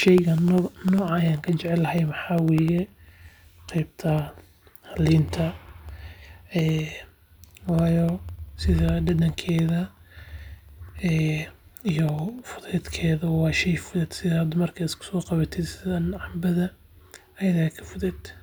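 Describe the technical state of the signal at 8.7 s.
At 8.7 s you're inside the periodic USB or driver dropouts running from 0.08 to 12.79 s: every 0.1 s a sub-millisecond slice drops to silence, ticking steadily through the speech.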